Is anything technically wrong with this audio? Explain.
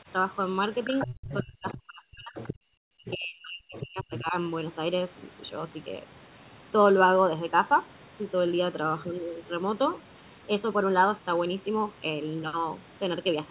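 Yes, three kinds of fault can be heard in this speech.

Channel delay (comb filtering) runs throughout. One channel lags by roughly 0.7 ms before the mono sum, cutting notches from about 700 Hz at 1.4 kHz spacing. The result sounds hollow, and a spectrogram shows fixed dark horizontal bands.

The other side's voice leaks through at 0.84–1.35, 1.69–1.76, 2.36–2.54, 3.06–3.16, 3.74–3.83 and 4.15–4.22 s. These are scraps about 10 to 15 dB under the speech, likely loudspeaker echo that the canceller left behind. They show as faint, separate harmonic traces.

Speech is suppressed in double talk at 0.86–2.37 s and 2.78–4.35 s. The voice dips and breaks by up to about 40 dB, likely because the echo canceller turned down both sides at once. The waveform shows gouged, patchy gaps.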